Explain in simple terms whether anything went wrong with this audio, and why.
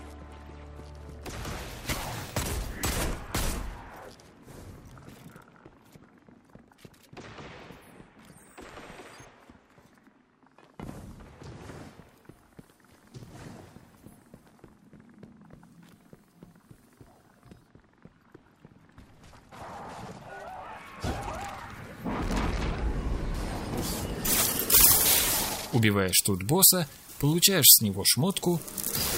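From 23.34 s to the end, pre-emphasis was left on: a treble boost like the one used for FM broadcasting was applied, but the matching cut that should undo it never happened. So the high end comes through far too strong, and the sound turns thin, bright and hissy.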